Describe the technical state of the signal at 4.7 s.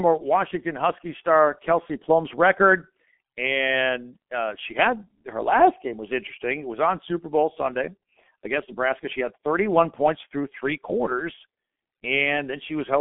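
At 4.7 s the speech is running through the G.723.1 codec, as it does for the whole clip. It sits at roughly 6 kbit/s in narrow telephone band with nothing above about 3.7 kHz, so it sounds muffled and hoarse, with smeared consonants.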